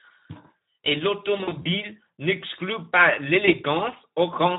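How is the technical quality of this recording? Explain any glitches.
The technical quality is poor. The whole clip carries audible codec damage, and there are two dropouts.

Speex codec damage runs throughout. The speech sounds hoarse and noisy, which fits a low Speex setting around 11 kbps. With so few bits for the excitation, the CELP coder can't rebuild the voice's fine structure. What reaches the ear is rough and grainy.

VoIP packet loss concealed by the speech codec appears between 1.37 and 1.69 s. About 120 ms of audio is missing, scattered over roughly 280 ms, with the longest gap near 40 ms. The decoder fills each hole by extending the last pitch and filter at falling gain. This gives brief patches of buzzy tone or coloured noise that fade. The voice stays weak for a moment afterwards.

A second, shorter concealment occurs at 3.45 to 3.51 s. The gap points to a single lost 20 ms frame. 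The decoder bridges it the same way, leaving a short stretched patch and a weak or distorted voice just after.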